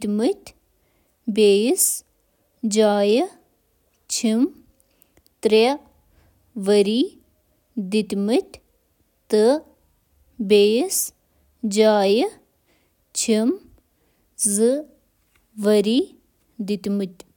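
No technical faults can be heard anywhere in this speech recording.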